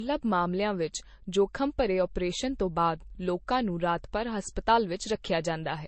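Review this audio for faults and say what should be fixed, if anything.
Transcoding between lossy codecs runs throughout the speech. Nothing sounds above 8.3 kHz. Smeared, swirly artefacts stack on each other. This fits a low-rate MP3 that was likely re-encoded to Vorbis. To prevent it, encode once, straight from the original uncompressed source.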